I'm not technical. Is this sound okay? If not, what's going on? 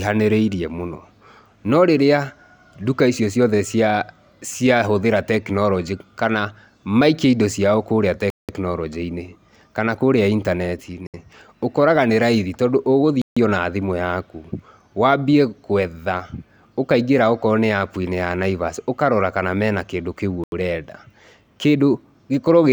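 No. Bluetooth stall at 8.30, 11.07, 13.22 (just before "na thimũ yaku wambie") and 20.44 s: the speech drops to silence for about 0.07 to 0.19 s, then carries on, likely from wireless interference delaying audio until the headphones ran empty.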